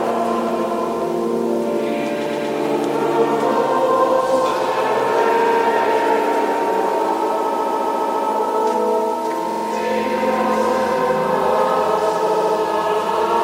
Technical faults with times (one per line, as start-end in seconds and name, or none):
2.25-2.49 repeated frames
5.39-5.60 repeated frames
7.55-8.24 repeated frames
9.50-9.64 repeated frames
12.26-12.54 repeated frames